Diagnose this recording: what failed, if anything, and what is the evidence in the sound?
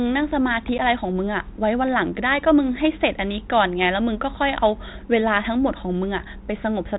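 Packet loss on an ADPCM call at the network stage: at about 0.78 s a hard-edged 10 ms hole, roughly one packet, then the speech returns briefly slightly distorted as the decoder's predictor and step size resynchronise.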